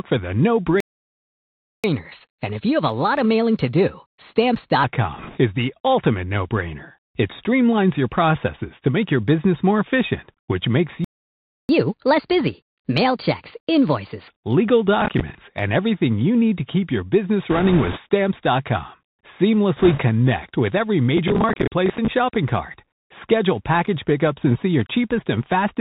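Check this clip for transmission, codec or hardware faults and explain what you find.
Several faults are present, on top of narrowband headset coding that runs through the whole speech clip.

Bluetooth CVSD headset codec, throughout: the speech is dull, with scratchy s sounds and a granular hiss underneath. Nothing above 4 kHz survives, and loud high sounds overrun the one-bit delta coder's adapting step, which fits CVSD at 64 kbps.

Playback stall, 0.80 to 1.84 s and 11.04 to 11.69 s: after "for the no" the sound cuts to silence for about a second, and later for about 0.65 s. This is likely the player running dry or its thread being blocked.

Catch-up at higher speed, 1.84 to 4.84 s and 11.69 to 14.28 s: after each stall the speech runs fast and high. It plays at 1.15 times speed (about two semitones up) and then 1.25 times (about four semitones) while the backlog is resampled away.

Bit errors on a Bluetooth voice link, 5.18 to 5.38 s, 17.50 to 18.00 s and 19.77 to 20.00 s: a rushing crackle rises over the speech, without sharp clicks. 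Flipped bits each nudge the CVSD step only slightly and then decay. The error rates are around 3, 5 and 4 percent, and the middle burst is the roughest.

Processor overload crackle, 15.01 to 15.35 s and 21.17 to 22.08 s: gritty tearing rides on the sound just before "and everything you need", and again between "with every" and "shopping cart". Buffers of around 10 ms missed their deadlines and replayed old audio with hard edges: roughly seven misses in the first burst and about thirty in the second.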